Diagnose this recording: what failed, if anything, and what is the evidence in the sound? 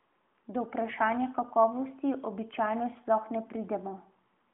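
Nothing failed in this recording, and the sound gives no evidence of any fault.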